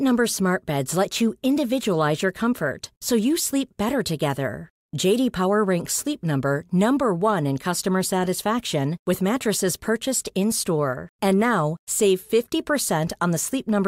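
Nothing in this bit of speech stands out as a technical fault at any point, so there's nothing to pin to a time here.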